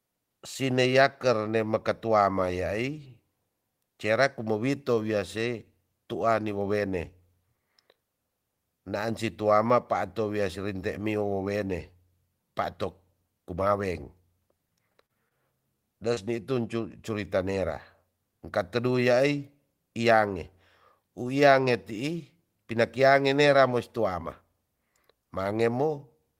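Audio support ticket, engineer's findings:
Repeated packet loss (robotic sound), 14.93–15.33 s: choppy stretch. Four gaps, longest 31 ms, about 17% of the span concealed. Network loss or late arrival, decoder extrapolating the last frame. Spectrogram: smeared, repeated harmonic slices; waveform shows flattened, periodic patches.

Short concealed packet loss, 16.14–16.19 s: brief smear or wobble. About 20 ms missing, bridged by a 26 ms fill from the preceding audio, then blended back. Likely a single late packet at the jitter buffer. Spectrogram: narrow blurred column; waveform shows a small smoothed patch.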